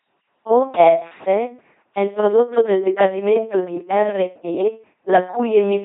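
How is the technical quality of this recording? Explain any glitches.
Heavily degraded throughout: the speech sounds buzzing and robotic, with nothing above 3.8 kHz. This is the LPC-10 vocoder, which rebuilds each moment from a simple filter excited by either a pulse train or noise, consistent with a 2.4 kbit/s military codec.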